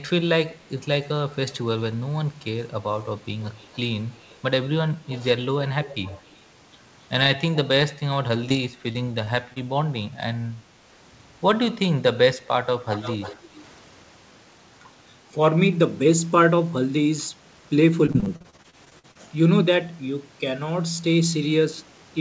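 Echo leak first appears between 3.41 and 3.78 s, then at 4.22 to 4.36 s, 5.08 to 5.16 s and 5.85 to 6.36 s. A faint copy of the speech trails the original by 262 ms. It is very quiet in the first two spots and grows more noticeable by 5.85 s. This is likely a far-end loudspeaker feeding its microphone, with an echo canceller that let some of the returned signal through.

Short concealed packet loss follows in a tight cluster: 8.28 to 8.31 s, 8.49 to 8.52 s, 8.52 to 8.56 s, 8.92 to 8.97 s, 9.25 to 9.28 s and 9.52 to 9.58 s. Each hole is about 20 ms, except the last, which is about 40 ms. The receiver covered each one by extending the preceding sound before blending back in. The result is brief smears and wobbles, and short consonants risk disappearing.

Echo leak returns at 12.93 to 13.36 s and again at 13.57 to 13.62 s. The delay has lengthened to 322 ms. The first of these is the most prominent echo in the clip. 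The second is a faint scrap.

Repeated packet loss takes over from 18.06 to 19.17 s. Holes arrive one after another, the longest about 44 ms. Roughly a third of the stretch is patched rather than received. Because each patch barely ends before the next gap, the sound turns choppy and robotic, with fragments missing. The band-limiting to 8 kHz throughout fits a wideband codec such as G.722.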